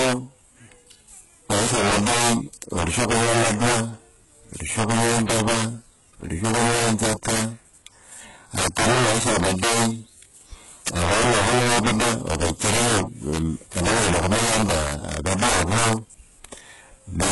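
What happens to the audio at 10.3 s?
At 10.3 s the speech carries two faults, both running through the whole clip. Integer overflow is one. The gain overdrives the signal by about 22 dB. The loudest samples, roughly 7 percent, pass the integer limit and wrap to the opposite sign. Each wrapped peak jumps across the full range. The result is a tearing, cracking buzz on loud sounds, sharper than clipping.

The treble also sounds rebuilt, with heavy codec damage. The likely cause is HE-AAC compression. Only the lower spectrum is coded. The upper bands are copied up and shaped coarsely. Nothing is present above 11.4 kHz, and the level of damage fits a very low bitrate, around 12 kbps. Harmonics do not line up across the crossover, so s sounds come out gritty and metallic.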